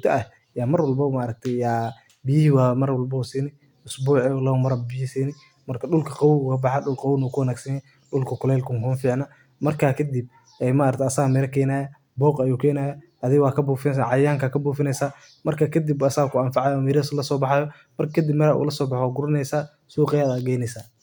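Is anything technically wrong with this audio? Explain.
No, nothing technically wrong stood out on listening to this speech recording.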